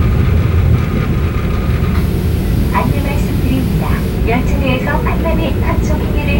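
Video or display buzz runs from start to finish. Signal from a screen or its video cable is leaking into the audio path, so the picture's own timing becomes audible: a rough buzz at the 59.94 Hz field rate, with gritty hash riding above it, plus a thin, very high whine at the 15.7 kHz line rate. The buzz sits roughly 25 dB below the wanted sound, low but constant underneath everything.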